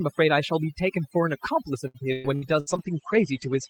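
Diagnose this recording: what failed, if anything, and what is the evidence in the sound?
Overdone noise removal in call processing, throughout: the background sinks to near silence with twinkling specks, and quiet parts of the speech get gated away along with the noise bands.

Repeated packet loss from 1.87 to 2.69 s, on the network side: choppy, robotic stretches as concealment repeats sound across several gaps, the longest about 115 ms, covering roughly 38% of that span.

Call bitrate drop from 2.68 s to the end, at the codec: highs cut off around 8 kHz instead of 20 kHz, and coarser, muffled coding, which fits falling from about 40 to 12 kbps.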